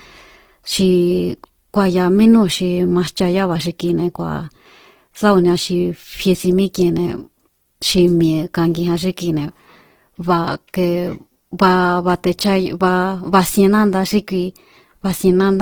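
Throughout, the speech sounds grainy and rough, with starved bands filled by noise rather than MP3-style swirl. This is likely Opus compression at about 16 kbps, reaching 20.3 kHz.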